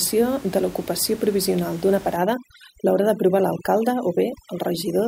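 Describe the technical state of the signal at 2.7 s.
At 2.7 s, overdone noise removal is active from 2.16 s to the end: bands near the noise estimate are cut hard, leaving twinkling background specks.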